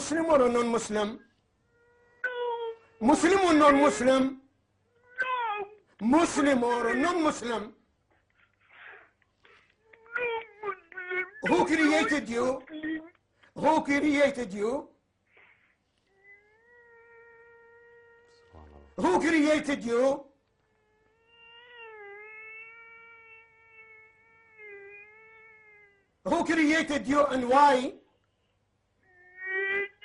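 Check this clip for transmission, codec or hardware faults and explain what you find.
Two faults are audible: codec damage throughout and a short reception glitch near the end.

MP2 compression, throughout: the dull, gurgling, granular sound likely comes from MPEG Layer II coding, with starved upper sub-bands switching off and the remaining bands coarsely quantised, consistent with roughly 80 kbps.

DAB burbling, 26.73 to 26.76 s: bit errors, around one in a thousand, slipped past error correction into the audio data, putting short blips of noise into individual sub-bands across a few frames. The result is a brief burst of burbling.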